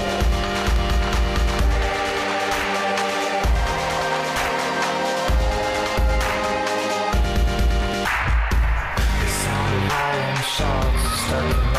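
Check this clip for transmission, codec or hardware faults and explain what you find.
One hardware-type fault stands out: a loud pop from 0.76 to 0.78 s, likely a voltage spike from a switch or static. It stands roughly ten decibels above the sound, appearing as a narrow waveform spike and a thin full-height spectrogram stripe.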